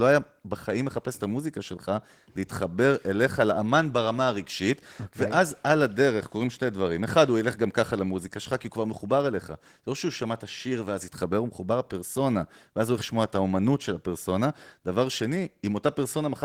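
The whole clip carries Opus voice compression, and the damage is plainly audible from start to finish. The speech sounds coarse and slightly hoarse, with a faint robotic edge. That points to the hybrid mode at a low bitrate, something like 16 kbps. The linear-prediction layer carries the lower band with a roughly quantised excitation, and a thin transform layer fills in above 8 kHz. The band itself isn't narrowed, with content running up to about 20.2 kHz.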